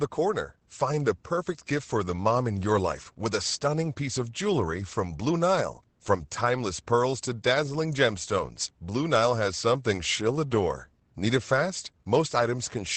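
A speech recording carrying Opus voice compression from start to finish: nothing survives above 8.6 kHz, and the voice sounds muffled, hoarse and faintly robotic, which points to the SILK mode at around 12 kbps. Unlike a simple low-pass filter, the coarse excitation coding roughens the voice itself, not just its top end.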